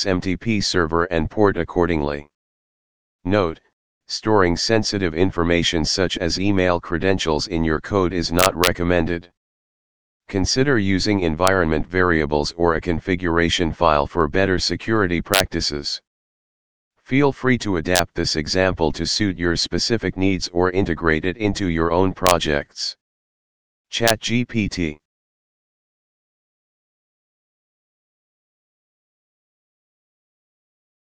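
Integer overflow produces violent cracks at 8.39–8.67, 11.47, 15.34–15.40, 17.96–17.99, 22.27–22.31 and 24.08–24.10 s, where loud peaks going past the largest integer wrap to the opposite sign instead of being limited.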